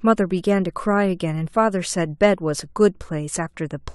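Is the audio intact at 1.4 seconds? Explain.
Yes, the speech at 1.4 s plays through intact, with no dropout, click, distortion or other technical fault at that moment.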